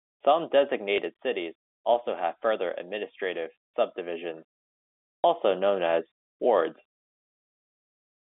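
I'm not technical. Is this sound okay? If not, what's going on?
No. Packet loss with last packet repeated happens twice, at 0.96 to 0.98 s, just before "cities also have further", and at 5.22 to 5.24 s, just before "also known as wards". Each time one 20 ms chunk of the speech never arrived, so the receiver played the previous chunk again to fill the gap. The repeat doesn't join smoothly with what comes before and after, so you hear a small blip. The narrow telephone-style sound comes from ordinary G.711 phone coding.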